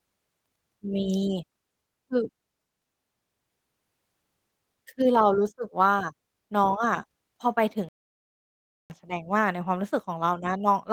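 At 7.89 s the speech cuts to silence and stays silent until 8.9 s, a gap of about 1.01 s. This is a playback stall: the output most likely ran dry because the player was starved of data or its thread was held up. A brief packet dropout is a few tens of milliseconds, often smoothed over by concealment. This is a clean, full second of nothing before the audio resumes. The light Opus voice compression at 20 kbps runs around the gap.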